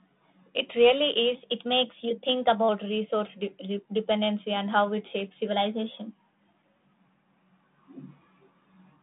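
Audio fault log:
1.35–2.69 s, drift correction step: the speech suddenly runs about 6.5% fast and its pitch rises by 109 cents, a little over a semitone, so it sounds abruptly hurried and sharp before snapping back to normal speed and pitch. This is likely a clock-matching stage changing its playback rate in one jump to drain its buffer, which moves speed and pitch together. The detuning is clear even within the narrow telephone band, which cuts off near 3.8 kHz.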